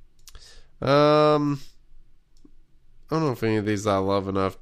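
Clock drift buffer slips run from 0.19 to 3.65 s in this speech clip: four regular clicks about 1.16 s apart. The likely cause is two devices on independent clocks, off by around 150 ppm, so a buffer drifts until a handful of samples are dropped or repeated.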